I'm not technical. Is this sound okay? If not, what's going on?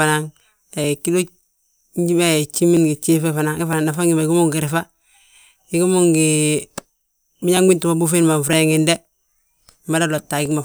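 No. The likely cause is two pieces of equipment keeping time on slightly different clocks, so the audio passed between them slowly piles up or runs short until a tiny chunk gets dropped or repeated. These are called clock drift buffer slips. You hear them as a click in the speech roughly once a second, about ten times in all, from 0.84 s to 10.46 s.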